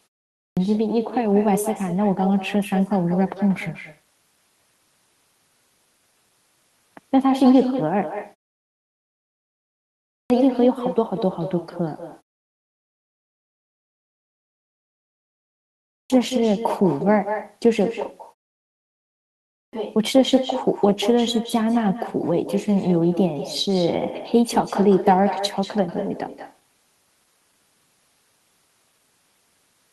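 From the outset, every phrase is trailed by a quieter, thinner copy, about 10 dB down and arriving around a fifth of a second late. This is echo with no canceller: the far end's loudspeaker feeds its microphone, and nothing strips the returned speech before it travels back.

At 0.41, 10.13, 15.92 and 19.54 s, speech bursts abruptly out of silence with its opening 160 to 190 ms missing. These are clipped starts after a pause: after the 0.41 to 3.78 s silences, the output device had gone idle and took that long to wake and resume playback.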